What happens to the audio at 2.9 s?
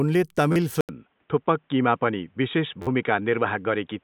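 Right around there you get a repeated buffer, from 2.82 to 2.87 s. New audio didn't arrive in time, so the device kept replaying the last chunk it had. The same tiny slice loops several times with a hard join on each pass, and it comes across as a short buzzy stutter rather than a clean word. The repeat length fits a 512-sample buffer, about 11.6 ms, and roughly 50 ms of real speech is lost.

That stutter also sits inside a longer stretch where the input likely switched to a poorer device, running from 0.81 s to the end. At the change there's a gap of about 80 ms, and after it the speech goes dull and boxy, with nothing above 3.8 kHz. A faint new noise floor comes in well beneath the speech, while the loudness stays about the same, so the difference you hear is mostly in tone rather than volume.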